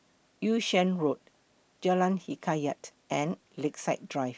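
Speech recording, no technical faults detected anywhere in the clip.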